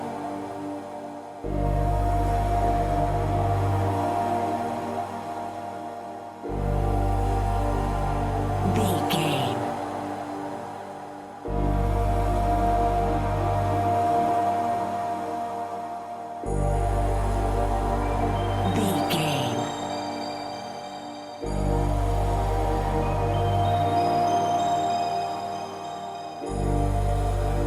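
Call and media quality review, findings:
No audible faults found; no action needed.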